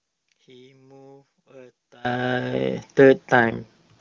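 From 0 to 2.05 s the speech sits about 28 dB down, likely from one channel inverted cancelling in mono. The waveform is nearly flat.

From 3.40 to 4.00 s an AMR rate drop makes the speech rougher and more synthetic, consistent with falling from 23.85 to 8.85 kbit/s. The spectrogram keeps its full band but turns coarser.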